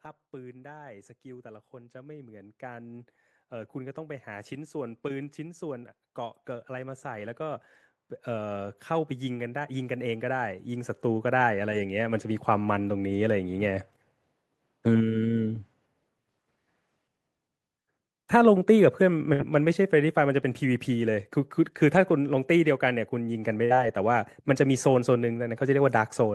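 Speech with two kinds of fault. From 8.24 s to 12.75 s an automatic gain rise lifts the level by about 9 dB. The control judged the input too quiet and raised its gain slowly, so the voice and the background noise swell together. On a waveform the envelope widens steadily across those four and a half seconds, and the noise floor between phrases brightens on a spectrogram. A burst of packet loss then strikes twice, at 19.33–19.42 s and at 23.65–23.73 s. Each time the receiver stretched the last sound it had for roughly 50 to 60 ms while fading it down, then resumed with about 60 ms of audio missing. Each burst appears as a smeared, decaying band with no new detail, ending in an abrupt jump in the waveform.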